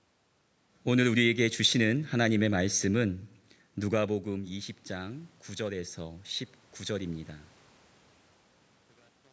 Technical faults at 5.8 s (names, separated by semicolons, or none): automatic gain rising